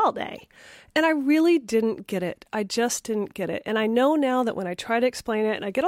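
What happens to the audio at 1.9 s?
Nothing goes wrong at 1.9 s; the speech carries on intact through that moment, with no dropout, click or distortion to be heard.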